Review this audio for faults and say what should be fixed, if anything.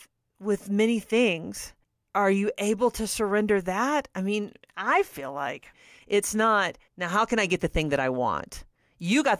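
Nothing here needs fixing; no faults were found.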